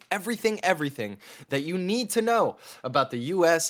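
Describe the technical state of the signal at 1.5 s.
At 1.5 s the signal is intact, with no audible dropout, distortion, glitch or other fault at that point.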